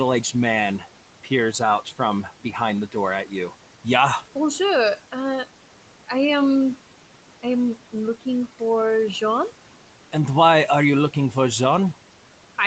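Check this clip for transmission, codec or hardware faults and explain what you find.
Two faults come from noise suppression on the call's microphone path, where the audio tops out near 8 kHz, as expected for this call codec.

Noise suppressor artifacts run through the whole clip. The suppressor judges each band frame by frame and pulls steady noise down by about 12 dB in the gaps, so the background pumps. A spectrogram shows blotchy, flickering noise that darkens between phrases.

Speech cut by the noise suppressor occurs between 2.24 and 2.55 s, after "out from" and before "the door at". The suppressor mistook quiet speech for noise and dipped it by up to about 12 dB over roughly a tenth of a second. The waveform narrows there, and the spectrogram shows faded energy, so the sound seems swallowed.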